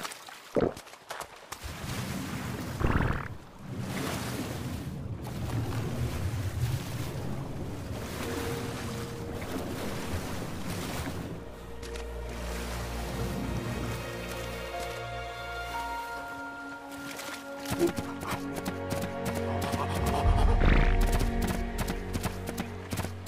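No technical faults are audible.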